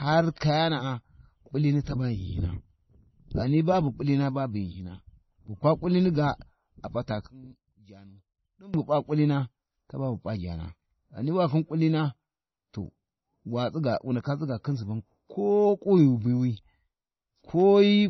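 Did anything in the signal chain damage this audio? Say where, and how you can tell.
Yes. Throughout, the speech sounds dull and swirly, with nothing above 5.9 kHz. This is likely low-bitrate audio saved at a high bitrate: the codec-stage damage fits a 24 kbit/s MP3 later re-encoded at 192 kbit/s.

From 7.27 to 8.74 s, between "kulini ga ap’a ta" and "bu p’a kulina taba", the voice drops about 20 dB. One channel inverted in the wiring is the likely cause, so the centred voice cancels when summed to mono.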